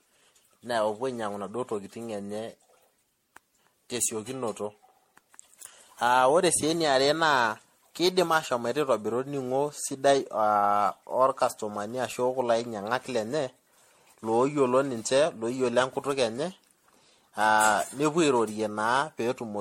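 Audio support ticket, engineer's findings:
Generation loss, whole clip. Speech sounds swirly, hollow and smeared, more than the bandwidth alone explains; consonant attacks blurred, nothing above 16.5 kHz. Likely an MP3 file decoded and re-encoded around ten times, which fits a 64 kbit/s chain. Each pass requantises on a shifted frame grid, so the noise and spectral holes stack up.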